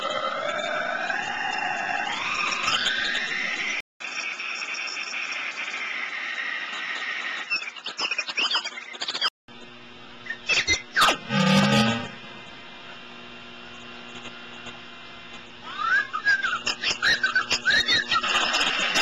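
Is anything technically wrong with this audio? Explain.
Yes. From 3.80 s to 9.48 s the sound loses its top end: nothing comes through above about 8.1 kHz, so it turns duller and boxier, then opens up again at 9.48 s. A 200 ms silence marks the changeover, and a different background noise appears, roughly 40 dB under the signal, while loudness stays about the same. This is likely an input switched to a poorer device, with capture moving mid-recording to a narrower-band microphone or headset path and then back.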